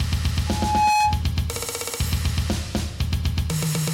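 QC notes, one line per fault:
0.47 to 1.22 s, loudspeaker feedback squeal. A pure tone at 844 Hz appears and swells over a little under half a second. It ends up a few decibels louder than the rest of the sound. The microphone is hearing the loudspeaker it drives. At 844 Hz the loop gain rises above one, so each pass round the loop makes that tone louder. It grows by itself until it stops at 1.22 s.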